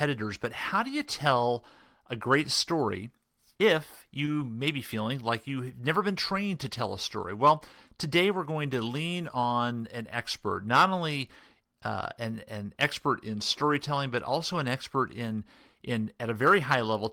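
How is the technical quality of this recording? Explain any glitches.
There is one glitch, a short concealed packet loss between 4.25 and 4.29 s, just after "a great story if" and before "may be feeling like". About 20 ms of the speech stream failed to reach the decoder in time, so the receiver synthesised 20 ms of substitute audio by extending the preceding sound, then crossfaded back into the real signal. To the ear this is a brief smear or wobble in the speech at that point.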